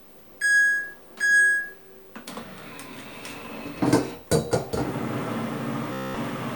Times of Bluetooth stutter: 5.93-6.16

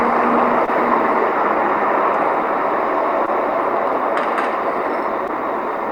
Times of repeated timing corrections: none

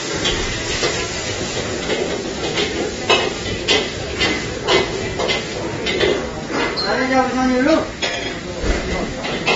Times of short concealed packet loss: none

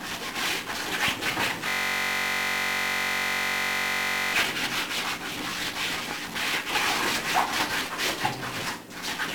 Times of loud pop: 1.08-1.10, 6.11-6.13

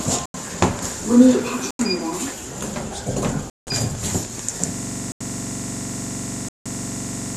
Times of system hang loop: 4.74-7.36

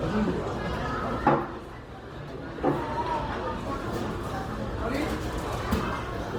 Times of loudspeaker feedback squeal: none

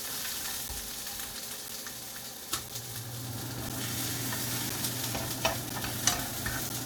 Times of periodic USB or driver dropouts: 0.68-6.70

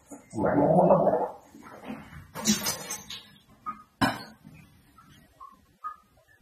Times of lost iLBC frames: none

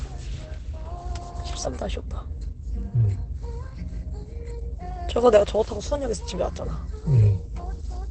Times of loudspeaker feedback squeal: none

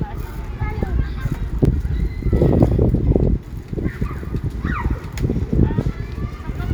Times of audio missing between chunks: 1.65

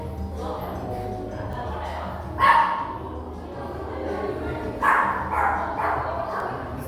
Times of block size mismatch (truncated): none

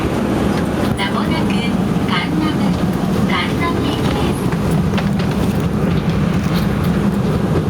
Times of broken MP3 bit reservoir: none

